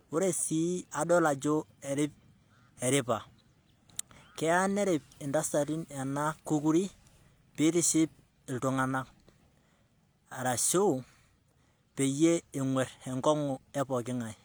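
A short recording of speech, with no technical fault to be heard anywhere in it. Nothing in the audio calls for a time, a cause or a fix.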